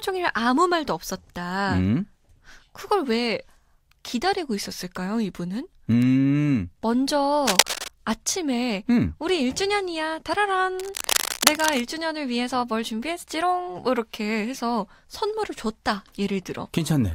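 From 7.47 to 7.88 s, and again from 10.79 to 11.80 s, bursts of dense, uneven crackle and rustle sit over the speech at roughly its own level. This cable scratch noise is likely a worn cable or connector being moved, its contact resistance fluctuating rapidly.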